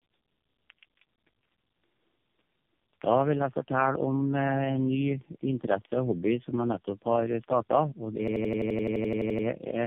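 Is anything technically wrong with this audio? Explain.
Yes, there are two faults.

Tandem speech coding runs throughout. The speech passed through three low-rate speech codecs in a row, G.729A, then AMR-NB twice, with G.711 links between them, each re-encoding the previous coder's damage. The speech sounds rough, muffled and warbly, with nothing above 3.4 kHz.

A system hang loop runs from 8.28 to 9.47 s. The system froze while the audio hardware kept replaying one 85.33 ms stretch, which fits a 4096-sample buffer, about 14 times at 11.7 Hz. The result is a rapid machine-gun stutter.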